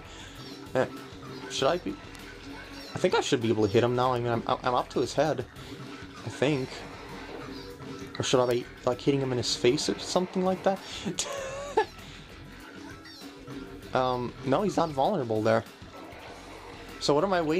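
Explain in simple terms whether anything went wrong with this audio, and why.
Four sharp ticks cut through the sound at 2.15, 4.16, 8.51 and 11.33 seconds, the one at 8.51 noticeably louder than the rest. Each is a bit error spike: somewhere in storage or a digital connection, one bit of the stored numbers flipped, so a sample or a few in a row suddenly jumped to a wrong value and then snapped back. That instant jolt is heard as a click that has nothing to do with the sound itself.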